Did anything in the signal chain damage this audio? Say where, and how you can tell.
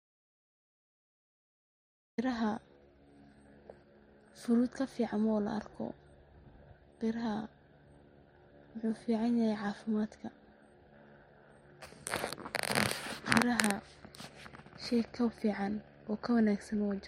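Yes. The input side likely lost its signal, through a disconnected device, failed link or mute, while the recorder kept writing silence: an audio dropout to silence. The speech clip opens in dead silence, with no room tone, until speech cuts in at 2.18 s.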